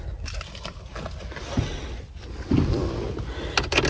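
The audio has passed through a call link, and nothing is heard above 8 kHz, which fits the G.722 wideband codec. At 0.42 to 0.44 s there is a skip ahead. About 0.4 s of audio is gone. Playback jumps straight to later material with no filler, and the two sides meet almost directly. The likely cause is a jitter buffer discarding a backlog. Two jitter buffer speed-ups follow. From 0.51 to 1.40 s the audio runs about 9% fast. From 1.83 to 2.76 s it runs about 5% fast. Pitch stays the same while pacing feels hurried. The receiver is trimming tiny pitch-period pieces, roughly a tenth of a second in the first stretch and half that in the second, to cut excess delay.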